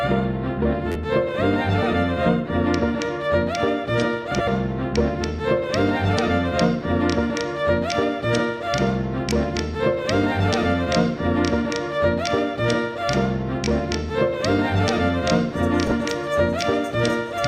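At 0.92 to 0.95 s, new audio failed to reach the output in time, so the device replayed its last buffer three more times. This is a repeated buffer. Each copy lasts about 11.6 ms, which fits a 512-sample buffer. The result is a brief buzzy stutter with hard joins, and around 40 ms of sound goes missing.

From 4.31 to 4.48 s, two adjacent runs of frames arrived in the wrong order and were decoded that way. This is frames out of order. Two blocks of about 80 ms each trade places, which produces a garbled flutter. At 15.87 to 15.92 s the same swap happens on a smaller scale, with blocks of about 20 ms, so it is heard as a shorter garbled flutter. No time is lost in either case.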